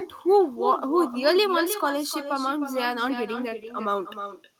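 Throughout the clip there is echo with no canceller: the far end's loudspeaker feeds its microphone, so every phrase returns about a third of a second later, roughly 11 dB quieter and thinner. A spectrogram shows each syllable's harmonics repeated as a fainter ghost trailing behind.

At 3.49 to 3.54 s comes a short stall from a late packet. The jitter buffer emptied, so about 18 ms of the preceding sound was stretched before playback resumed where it left off, nothing lost but everything after arriving 18 ms later. The waveform shows a held, repetitive stretch with a slight buzz or dip.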